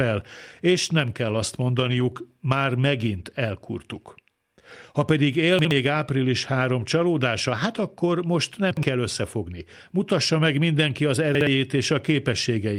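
Brief rough, noisy patches at 1.09, 1.28, 1.34, 1.68, 1.84, 1.90 and 2.00 s, each 20 ms, those at 1.84 and 2.00 s just before "már megint elkurtuk": lost packets rebuilt from error correction, played from low-bitrate copies instead of leaving gaps. Jumbled moments at 5.59–5.71, 8.71–8.83 and 11.35–11.47 s, the last just after "meg mindenki az", are chunks out of order: a 60 ms chunk arriving one chunk late, leaving hard joins.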